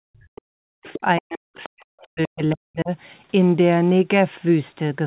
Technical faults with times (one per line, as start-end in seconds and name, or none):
0.00-2.91 speech suppressed in double talk
0.86-0.99 other side's voice leaking through
1.61-1.69 other side's voice leaking through